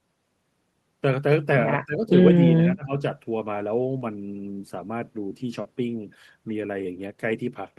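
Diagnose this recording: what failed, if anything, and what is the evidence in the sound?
The speech sinks twice in quick succession, from 1.85 to 2.11 s and again from 2.35 to 2.99 s, losing level by up to around 15 dB and sounding thinned and partly gated. This points to call processing, most likely speech suppressed in double talk. The far end was talking at the same moment, the echo canceller could not separate this talker from its own loudspeaker echo, and it pulled the near-end signal down along with the echo.

Two brief smears interrupt the speech, one at 3.99 to 4.03 s and a longer one at 5.61 to 5.67 s. In each, the sound briefly carries on as a wobbly continuation before blending back into the real audio. This is short concealed packet loss on the network stage. About 20 ms and then 40 ms of audio arrived too late for the decoder, which extrapolated the preceding sound to bridge each gap. 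The top end stops near 12 kHz, which fits an Opus call codec.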